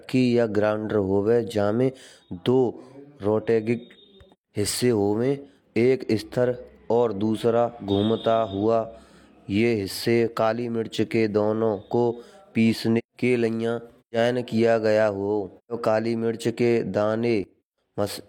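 In this speech clip, the sound and its background noise drop together by about 13 dB at 17.44 s and stay down until 17.78 s, a sudden gain jump, likely from a setting applied without a ramp.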